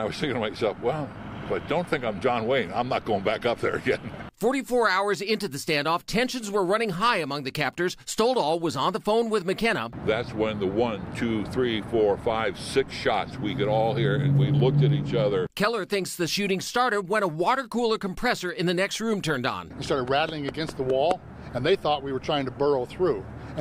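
Nothing stood out as a technical problem on listening to this audio.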